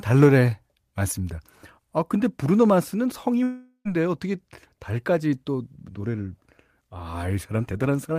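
Speech, broken from 3.43 to 3.88 s by what is likely a long network dropout. The last sound is stretched into a fading buzz, followed by about 90 ms of silence, and the speech resumes with about 0.42 s missing. On a spectrogram, the harmonics smear into flat, unchanging bands that fade to a blank gap. The waveform shows a decaying envelope and then a flat line.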